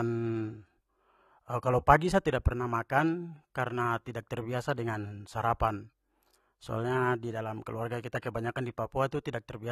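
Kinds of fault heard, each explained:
AAC compression: the speech sounds dull and smeared throughout, with warbling, fizzy sibilants, unlike a plain low-pass. This is likely AAC-LC near 32 kbps.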